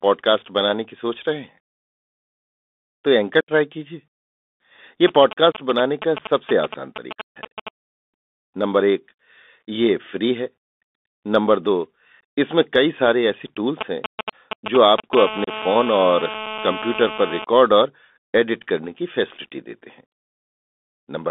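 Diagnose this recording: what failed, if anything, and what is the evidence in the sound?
Bluetooth CVSD headset codec, throughout. This is a codec-stage fault. The sound is confined to roughly 200 Hz to 3.6 kHz, which fits a 64 kbit/s CVSD link. CVSD encodes each sample as a single up-or-down bit, and its step size only adapts gradually. Fast, loud high-frequency content outruns the step, so sibilants turn scratchy. A grainy hiss also sits under the speech, and the damage is plainly audible.

Unconcealed Bluetooth headset packet loss is a fault on the wireless link between headset and phone. Dropouts fall at 3.41 to 3.51 s (about 75 ms), 5.52 to 5.55 s, 7.24 to 7.38 s (about 140 ms, the longest), 12.22 s and 15.44 to 15.50 s. Missing voice packets were replaced by silence instead of being concealed. The result is hard-edged holes that can click, and the speech briefly returns quieter as the CVSD decoder recovers.

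GSM signalling bursts come in at 5.08 to 7.69 s at about 10 dB below the speech, and again at 13.81 to 15.15 s at about 5 dB below. This is an analogue-stage fault. A nearby 2G phone transmitting in bursts at 217 Hz was rectified by the audio circuitry. The phone was only signalling, so its transmissions come in short groups. That is why the interference is heard as a galloping pattern of ticks and brief 217 Hz buzzes.

GSM phone buzz runs from 15.17 to 17.45 s, at about 10 dB below the speech. It follows directly on the second signalling episode, as the nearby phone moves into a call. Once in a call, the phone transmits continuously at its 217 Hz burst rate. The audio circuitry rectifies those pulses into a steady, hard, raspy buzz rich in harmonics. The buzz bears no relation to the speech, which again points to RF pickup in the analogue wiring.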